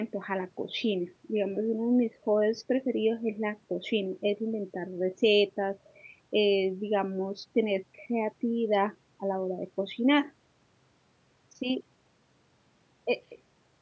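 Nothing's actually wrong with this speech recording: it's simply gone through a call's microphone processing, which trims the lowest bass and leaves nothing above 8 kHz, and that's just how call audio is meant to sound.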